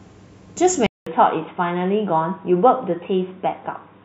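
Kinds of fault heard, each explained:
Input switched to a poorer device: from 0.87 s to the end, the speech suddenly loses its top end, with nothing left above 3.8 kHz, so it turns dull and boxy. A silence of about 200 ms marks the switch. The level stays roughly where it was, but a new, faint background noise comes in, around 45 dB below the speech. The cause is likely the recording input changing to a lower-bandwidth microphone or headset profile partway through.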